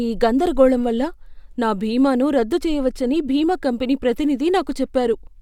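Nothing goes wrong anywhere in this bit of speech, so there's no technical fault to point to at any moment.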